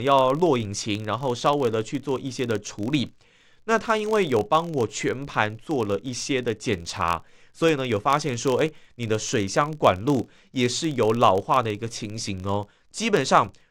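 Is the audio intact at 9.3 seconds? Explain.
No. At 9.3 seconds the speech carries a low, steady buzz of fine ticks at about 43.1 Hz, rising and falling with the loudness of the voice. This is a filter restarted on every block, a fault that runs through the whole clip. The filter loses its memory at each block boundary and starts again from silence, so each block opens with a small transient. That tick rate fits a 1024-sample block.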